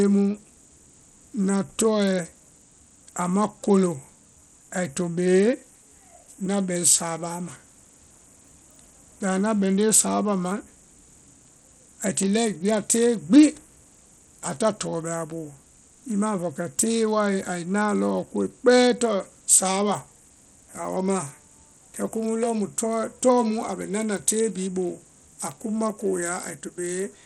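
From start to finish, the speech carries plainly audible codec damage consistent with Bluetooth SBC compression, the likely cause. Nothing is present above about 13.1 kHz, so the top octave is simply missing, and what treble remains sounds grainy and unstable. The artefact level points to a starved bit pool, in the region of 80 kbps, where the upper sub-bands receive almost no bits and the rest are coarsely quantised, leaving a gritty noise bound to the sound.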